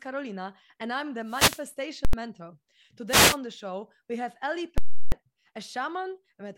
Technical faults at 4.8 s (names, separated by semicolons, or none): invalid numbers at full scale